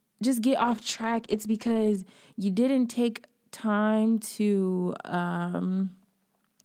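From 0.63 to 2.09 s, after "just get", the call's bandwidth estimate collapses and the encoder is starved of bits. This call bitrate drop fits a fall from 32 to 11 kbps. The speech turns rough, watery or muffled until recovering at "you didn't take time".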